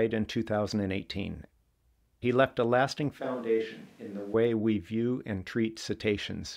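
At 3.20 s the speech suddenly turns roomy and hollow. The low end thins out. The level drops by about 5 dB. Background noise rises to around 30 dB below the speech. The likely cause is a switch to a distant microphone: the close microphone's signal failed or was left out, and one further away picked up the voice instead. At 4.34 s the sound snaps back just as abruptly.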